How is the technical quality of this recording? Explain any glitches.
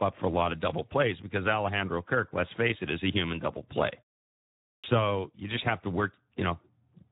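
The recording has two faults: continuous codec damage and one swallowed word onset.

Speex codec, throughout: The speech sounds hoarse and noisy, with little content above 3.8 kHz. The CELP coder has too few bits to reproduce the excitation, which fits a low setting of about 11 kbps, so the voice takes on a rough, noisy texture.

Clipped start after a pause, at 4.75 s: After a 0.8 s silence, the output device needed time to wake. About 87 ms was lost, so "you just have to" begins abruptly, missing its first sound.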